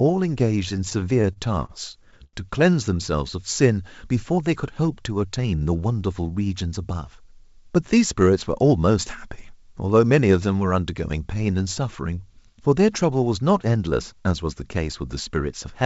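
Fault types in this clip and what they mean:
Repeated stalls (stutter): packets arrived late, so the jitter buffer kept running dry; nine gaps, about 212 ms filled in total, make the speech drag from 0.77 to 2.36 s.
Jitter buffer speed-up: the buffer held more than its target, so short pitch-period chunks were cut, roughly 50 ms, making speech briefly hurried at 112% speed around 5.25 to 5.61 s.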